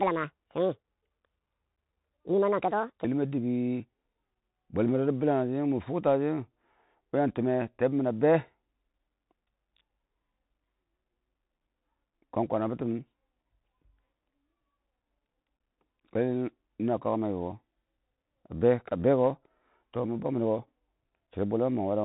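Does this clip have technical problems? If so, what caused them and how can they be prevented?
Yes. A section at the wrong speed runs from 0.0 to 3.05 s: the speech plays about 1.56 times too fast, so pitch rises roughly seven semitones and delivery sounds hurried. The likely cause is playback or editing against a mismatched sample clock. Checking sample-rate settings at every import and export step prevents this.

The Bluetooth CVSD headset codec colours the whole clip. Nothing passes above 3.8 kHz, and the one-bit up-or-down stepping leaves granular hiss and scratchy s sounds, which fits a 64 kHz CVSD headset link. Recording through a wired microphone, or over a wideband Bluetooth profile, avoids it.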